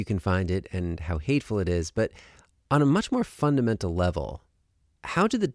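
No faults are audible anywhere in the recording.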